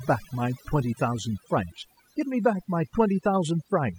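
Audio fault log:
Throughout: overdone noise removal. The noise reduction on this speech was set far too hard. Frequency bands close to its noise estimate are pushed right down or shut off. Quieter parts of the speech fall below that line and vanish with the noise. Between phrases the background drops, broken by twinkling, chirpy specks where isolated bands flicker on and off.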